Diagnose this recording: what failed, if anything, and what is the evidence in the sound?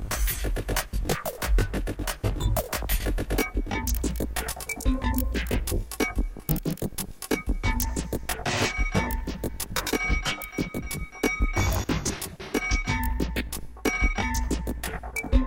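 Channel delay (comb filtering) at the driver or buffer stage, heard throughout: a rough, slightly doubled sound with fixed, evenly spaced notches starting around 30 Hz. One channel lags by roughly 20 ms before the mono sum. The notches stay fixed, unlike the shifting smear of codec artefacts.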